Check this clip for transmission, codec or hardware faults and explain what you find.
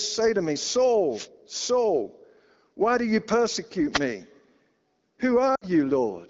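Two kinds of fault are audible in this speech clip: wireless microphone noise hits and lost AMR speech frames, heard through an AMR-WB (HD Voice) path whose light coding sounds consistent with a 12.65 kbit/s mode.

Wireless microphone noise hits occur at 1.10 to 1.28 s, just after "to me", and at 3.91 to 4.01 s, just after "why do you persecute". The FM radio link fades as reflected paths cancel, so receiver noise rises over the signal, producing a brief swish of static lasting about 0.19 s and 0.1 s.

Lost AMR speech frames occur at 5.55 to 5.65 s. About 60 ms of coded speech failed to arrive intact, which fits three 20 ms frames. The decoder repeats the last good pitch and spectral settings at falling gain, so the sound drops to near silence before recovering briefly rough.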